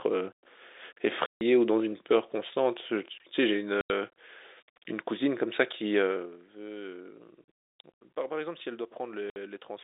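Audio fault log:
1.26–1.41 s, 3.81–3.90 s, 7.44 s and 9.30–9.36 s: packet loss filled with silence. The speech drops out completely for about 150, 90, 30 and 60 ms, and each hole has abrupt edges. All the lengths are multiples of 30 ms, which points to 30 ms packets being lost and replaced by digital silence. On a waveform, each hole is a flat line with square cut-offs. On a spectrogram, each is a blank vertical band.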